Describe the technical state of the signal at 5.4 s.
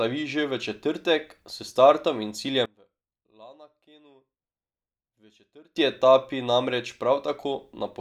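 At 5.4 s the speech is faint. The level has dropped by about 27 dB. This is one channel inverted, running from 2.66 s, after "četrtek s startom in", to 5.76 s, before "etapi namreč". Likely one stereo side has flipped polarity, so the shared centre cancels when summed to mono. Only a faint difference signal remains.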